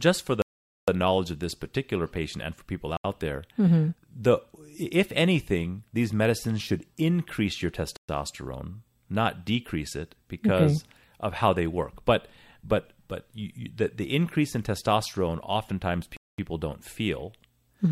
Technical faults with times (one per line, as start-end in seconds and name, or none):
0.42-0.88 Bluetooth stall
2.97-3.04 Bluetooth stall
7.97-8.09 Bluetooth stall
16.17-16.38 Bluetooth stall